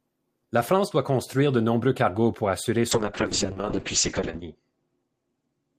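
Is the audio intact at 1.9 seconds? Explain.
Yes, at 1.9 seconds the speech plays through cleanly with no audible fault.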